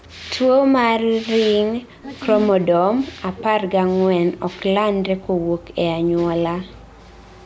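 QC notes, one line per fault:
0.02–0.28 s, 2.14–2.20 s, 4.59–4.63 s, 7.14–7.45 s: echo leak. A faint ghost of the speech trails it by 222 ms, roughly 25 to 35 dB below the direct sound. This is likely a loudspeaker-side echo canceller letting residual pickup slip back into the call.
1.79–2.07 s, 2.40–2.46 s, 2.65–4.46 s, 5.00–5.84 s: speech suppressed in double talk. The speech dips, dropping as much as 40 dB in the long stretch and only slightly around 2.4 s. This is likely the echo canceller ducking everything while both ends talked at once.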